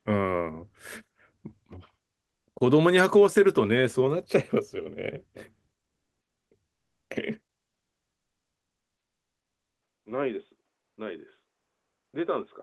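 From 6.75 to 7.09 s, comfort noise replaces the background, likely because the sender paused transmission during a quiet stretch, as Opus-style discontinuous transmission does. For 340 ms the real room tone gives way to smooth, featureless hiss, about 18 dB quieter.

At 9.7 s the input switched to a poorer device, likely a different microphone or a headset call profile. An 80 ms gap marks the change, then the sound stays dull and boxy to the end, with nothing above 3.6 kHz, a level roughly 10 dB lower and new background noise.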